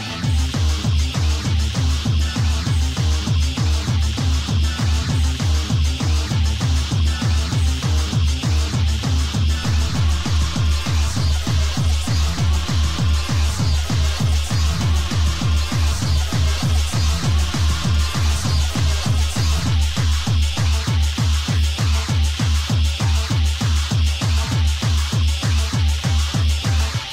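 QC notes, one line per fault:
9.63 to 20.69 s: DC step, a baseline offset of about -29 dBFS that holds, thumping at both edges while the sound continues intact, unlike a dropout.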